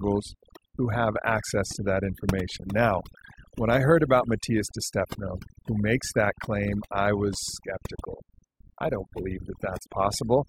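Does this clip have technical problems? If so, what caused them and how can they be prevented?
Yes. Overdone noise removal runs throughout: a noise reducer set too strong shuts off frequency bands near its noise estimate, taking quiet speech with them. Pauses appear on a spectrogram as dark gaps with isolated twinkling specks. A gentler reduction setting prevents it.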